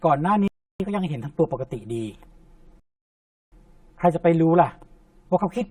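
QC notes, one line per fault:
throughout: channel delay (comb filtering). One channel trails the other by roughly 5 ms, and when the two are summed to mono the shared speech cancels at evenly spaced frequencies, the first notch near 100 Hz. The fixed notch pattern leaves the voice hollow, thin and phasey from start to finish.
0.48–0.80 s and 2.80–3.52 s: rebuffering stall. Playback ran dry and halted until more audio arrived, then continued exactly where it stopped. The speech drops to silence for 0.32 s and then 0.72 s, adding dead time but losing no sound.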